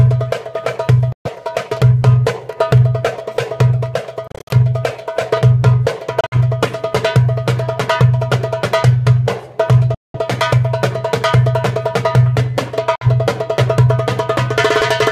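The audio cuts to silence five times, at 1.12–1.29 s, 4.27–4.54 s, 6.21–6.36 s, 9.94–10.19 s and 12.95–13.07 s. These are likely Bluetooth dropouts, where packets arrived too late for the headphones and were discarded. The second and third break into several short gaps, none longer than 56 ms. Unlike a stall that resumes where it stopped, the sound returns further along each time, skipping about 56 to 196 ms.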